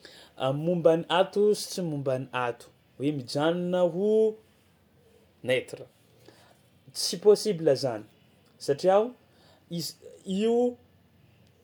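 No technical faults can be heard anywhere in this speech recording.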